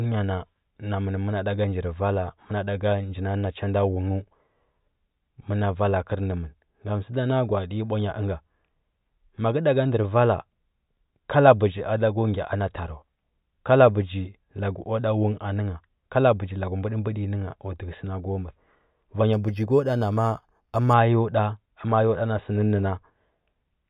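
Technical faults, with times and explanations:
19.33–20.94 s: imaging from linear upsampling. In this stretch the speech sounds dulled at the top and carries a faint metallic shimmer on sibilants. It points to audio held at an 8 kHz rate and raised to 48 kHz by straight-line interpolation between samples. That acts as a weak low-pass filter, softening content toward 4 kHz and leaving mirror images of the spectrum, the first from 4 to 8 kHz, roughly 35 dB below the speech.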